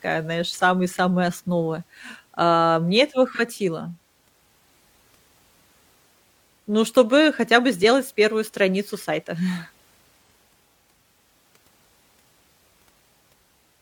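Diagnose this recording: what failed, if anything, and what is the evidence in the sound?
Two brief smeared, noisy patches interrupt the speech, one at 3.34 to 3.39 s just after "основы а мне этого" and another at 10.29 to 10.35 s. This is AAC frame loss with concealment at the codec stage. Each gap is about 43 ms, which fits one lost 1024-sample frame. The decoder covered each missing frame by reusing the previous good spectrum with altered phase or interpolated energy, which gives that blurred texture rather than a hard dropout.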